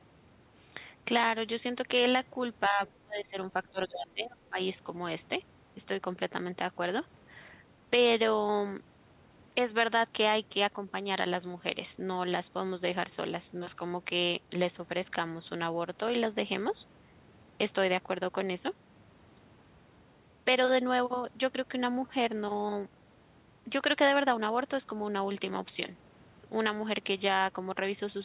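From 2.69 to 2.83 s the speech dips about 10 dB, then from 3.02 to 4.58 s it falls up to around 25 dB. This is speech suppressed in double talk, likely from an echo canceller turning everything down.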